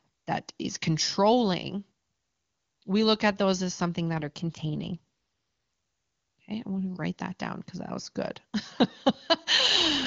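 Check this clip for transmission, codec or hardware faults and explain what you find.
The clip shows two AMR rate drops. From 4.14 to 4.97 s, just after "at those as something", and again from 9.57 s to the end, the wideband speech coding falls from its clean top rate to what sounds like 8.85 kbit/s. Weak-link adaptation shifts bits to error protection, so the speech turns rougher and more synthetic with the band intact and no gap.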